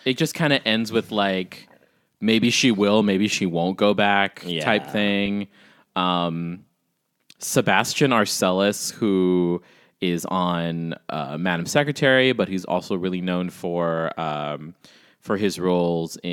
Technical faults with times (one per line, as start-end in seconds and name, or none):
2.44-2.46 corrupt frame decoded
5.26-5.28 corrupt frame decoded